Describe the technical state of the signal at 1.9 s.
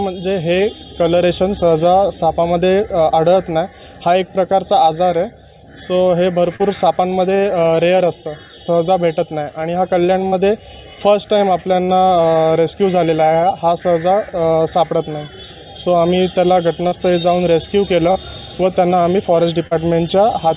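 At 1.9 s the signal is intact, with nothing above about 4 kHz, which fits a narrowband G.711-type call path working as expected.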